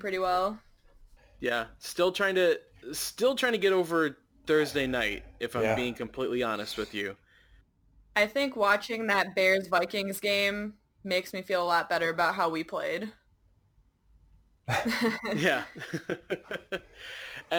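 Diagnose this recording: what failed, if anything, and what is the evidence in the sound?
Crude rate conversion at the sample-rate conversion stage, present throughout the speech. A gritty, inharmonic fizz rides on louder and brighter passages, which fits 44.1 kHz material taken to 48 kHz by repeating nearest samples without filtering. The resulting error sits roughly 25 dB below the signal.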